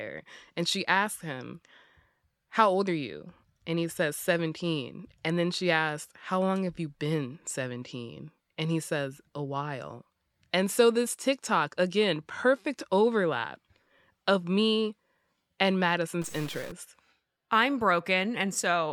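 A likely stuck bit in the converter or data path holds one bit fixed from 16.22 to 16.72 s, just after "of me and". About half the samples are shifted by that bit's weight, a step of about -40 dBFS, producing a harsh, buzzy distortion.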